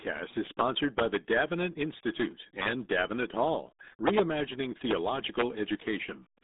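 RealAudio 14.4 codec damage runs through the whole speech clip. The low-rate coding strips the signal to a narrow line band of about 250 Hz to 3.7 kHz, with nothing above 3.8 kHz. That degree of loss fits a codec running near 8 kbit/s. The damage is heavy. Speech sounds muffled and boxy, with a gargling, watery texture where the coder rebuilds each frame from a coarse model rather than the true waveform.

Integer overflow strikes from 5.39 to 5.42 s, lasting about 34 ms. A sum or gain stage pushed the loudest samples only about 1 dB past the largest representable integer. Instead of being limited, those peaks wrapped around to the opposite extreme, so each one jumps across the full range. The result is a harsh, violent crack, far sharper than ordinary clipping.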